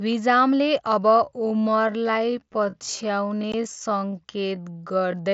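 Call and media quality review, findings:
Time-stretched section, 1.23 s to end: likely a duration-fitting stretch in software, slowing playback to 0.58x while preserving pitch by repeating short segments. Pace drops abruptly mid-speech, with unchanged pitch.

Unconcealed Bluetooth headset packet loss, 3.52 s: headset-to-phone voice packets lost with no concealment, filled by silence or an idle pattern. The result is a 15 ms hole with hard edges, consistent with roughly two dropped frames, cutting the wideband mSBC speech briefly.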